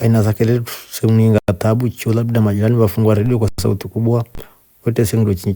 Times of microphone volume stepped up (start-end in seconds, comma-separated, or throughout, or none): none